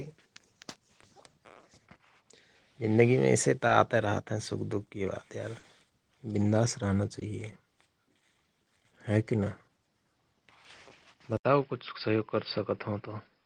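At 3.67 to 3.71 s, just after "जिन्दगिमे ऐसेत" and before "रहत हयं सुख दुख", there is a short concealed packet loss: about 20 ms of the speech arrived too late and the receiver patched the gap by extending the preceding sound before blending back. The same happens near 5.59 to 5.65 s, with about 40 ms filled, and at 7.19 to 7.23 s, right after "विन्दास रहना". Each is a brief smear or wobble, not a clean silent gap, which separates concealment from a plain dropout.

From 11.37 s to the end the sound changes character after a gap of about 80 ms. Nothing above 5.2 kHz survives, so the speech turns duller and boxier, and a different background noise appears, sitting roughly 50 dB below the speech, while the loudness stays much the same. This is likely an input switched to a poorer device. A codec narrowing its bandwidth would give the same band limit without the short silence, the new noise floor, or a change of tone that holds steadily to the end.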